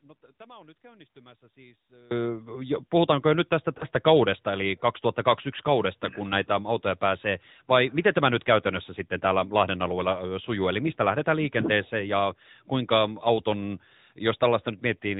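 From the first moment until 2.11 s, the audio is already in an audio dropout to a faint residue. Only a weak trace of sound sits about 30 dB below normal level, then the full signal returns abruptly. That sudden return marks it as a lost feed rather than a fade or a natural pause, with the path likely staying live after the signal was cut upstream.

Throughout the clip, the speech carries the sound of the AMR narrowband mobile codec. Nothing passes above 4 kHz, and the voice has a buzzy, synthetic edge from the vocal-tract model. This is plainly audible damage, consistent with the 10.2 kbps AMR-NB mode. Its buzzy, synthetic tone separates it from simple low-pass filtering.

Just after "puhutaanko jo nyt tästä", between 3.78 s and 4.03 s, the voice briefly wavers and dips. This points to lost AMR speech frames, most likely a single 20 ms frame. The decoder reused its last pitch and vocal-tract settings at reduced gain, so the sound smears briefly instead of cutting to silence. 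That smearing sets it apart from the dropout at the start.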